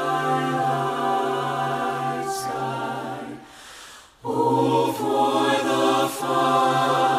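No technical faults are audible anywhere in this audio.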